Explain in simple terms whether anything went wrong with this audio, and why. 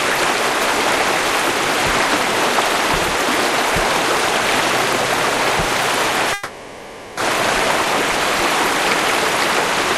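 At 6.33 s the sound stalls and is stretched into a fading buzz until 7.18 s, a call audio freeze, likely from delayed network packets. Unlike a dropout, nothing is lost: the sound picks up exactly where it stopped, just 0.84 s later.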